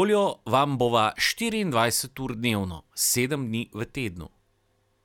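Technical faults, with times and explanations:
No technical faults can be heard in this speech recording.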